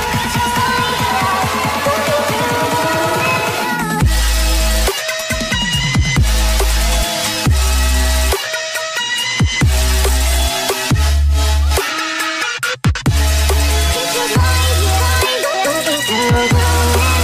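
No technical faults are audible.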